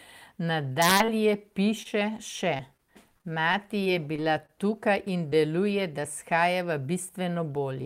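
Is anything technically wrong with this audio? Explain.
Yes. The speech has two kinds of packet-loss damage.

Repeated packet loss (robotic sound) runs from 0.73 to 1.45 s, with four gaps of up to 23 ms, and from 3.18 to 4.50 s, with six gaps of up to 26 ms. Each lost piece is patched by extending the preceding sound, and the next gap follows closely. Those stacked patches give a choppy texture with pieces missing across the whole stretch rather than a single blip.

Short concealed packet loss is isolated single gaps of about 20 ms each, at 1.83–1.87 s, 2.57–2.61 s, 2.77–2.80 s and 5.30–5.35 s, the last just before "deluje da shajava", where the fill adds a few milliseconds. The decoder synthesises a continuation and blends back in, leaving a brief smear or wobble.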